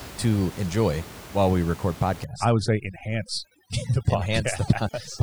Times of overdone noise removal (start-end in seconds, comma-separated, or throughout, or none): 2.24-5.22